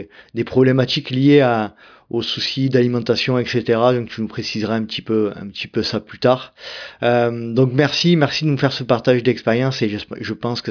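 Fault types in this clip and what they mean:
No technical faults are audible.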